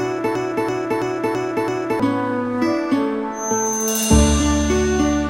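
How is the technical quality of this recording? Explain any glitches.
The recording has two technical faults: a broken-record loop early on and a feedback whistle near the end.

From 0.35 s to 2.0 s there is a broken-record loop. A fragment of about 0.33 s repeats five times, back to back and identical each time. It sounds stuck, like a skipping disc. The likely cause is a player, encoder or stream that stalled and kept resending the last piece it held. The audio that belonged in those 1.6 seconds is gone.

From 3.3 s to the end there is a feedback whistle. A thin, steady tone sits at 6.3 kHz, roughly 10 dB below the main sound. Its level swells and fades slowly but never builds up. The likely cause is a loudspeaker-to-microphone loop held right at the edge of feedback. One high frequency keeps ringing without running away.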